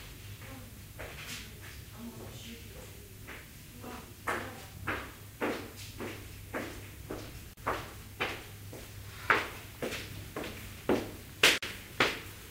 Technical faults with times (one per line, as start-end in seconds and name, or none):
7.53-7.57 gap at a join of encoded pieces
11.58-11.63 gap at a join of encoded pieces